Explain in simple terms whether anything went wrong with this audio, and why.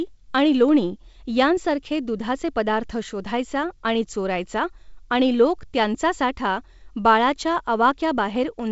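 Nothing went wrong; the speech sounds as intended.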